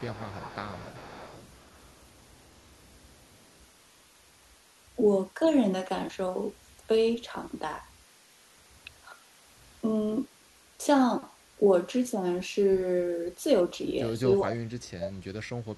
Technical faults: echo leak; speech suppressed in double talk

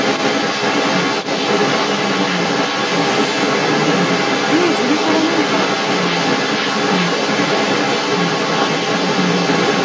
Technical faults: other side's voice leaking through

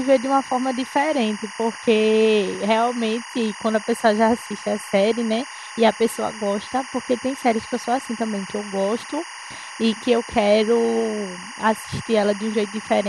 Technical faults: timecode bleed

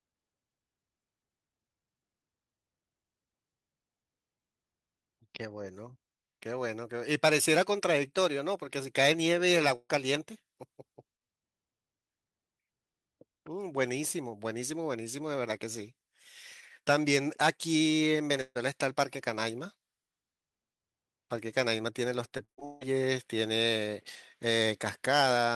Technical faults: burst of packet loss; repeated packet loss (robotic sound)

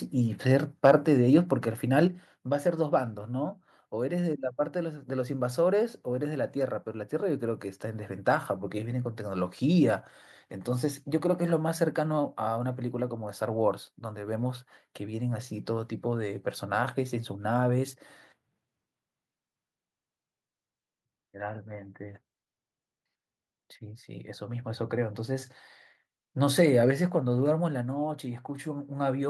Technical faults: microphone volume stepped down

